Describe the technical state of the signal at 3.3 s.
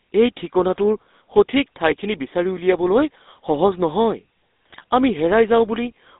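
At 3.3 s the speech carries GSM full-rate codec damage, present across the whole clip rather than at that instant alone. The coder models the vocal tract and drives it with sparse, regularly spaced pulses, which gives the plainly audible buzzy, gravelly roughness, consistent with a 13 kbps stream. On a spectrogram the energy sits inside a band from about 250 Hz to 3.7 kHz, blank above and below.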